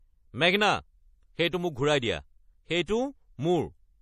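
MP3 compression runs from start to finish. Nothing reaches above 14.2 kHz, and the damage is plainly audible: the speech has a watery, swirling texture, and s sounds break into metallic chirps. The likely cause is an MP3 encoder starved of bits, which fits a low bitrate of around 40 kbps. Short of bits, it cut the treble at a fixed frequency and discarded weak spectral lines, which flicker on and off from frame to frame.

Pre-echo appears from 2.86 to 2.88 s, a short hiss spreading about 21 ms ahead of a sharp attack, which then sounds softened and smeared. The codec spreads its quantisation noise across a whole transform block. Because this attack falls late in its block, noise sized for the loud onset also fills the quiet moment just before it, where nothing masks it.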